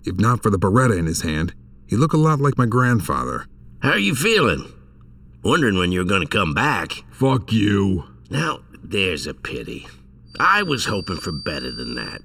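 The whole clip has a hollow, phasey quality from channel delay, heard as comb filtering. One channel is running late by something like 0.7 ms, and when the two are folded to mono, whatever they share cancels at evenly spaced frequencies. The first notch sits around 700 Hz, with more following up the spectrum at regular intervals. The notches stay put from start to finish, which gives the audio that fixed, tube-like colour.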